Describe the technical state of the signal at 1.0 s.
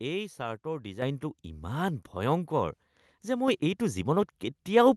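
At 1.02 s, just after "এই ছাৰ্টৰ", the microphone volume stepped up: the input gain jumped by about 8 dB at once. Speech and background noise get louder together in a single step, unlike a compressor's gradual gain changes, which follow the signal level.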